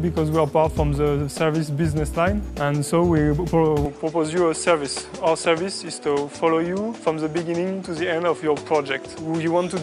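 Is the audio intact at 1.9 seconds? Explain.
Yes, at 1.9 seconds the audio plays through cleanly, with no dropout, click, distortion or other fault audible at that moment.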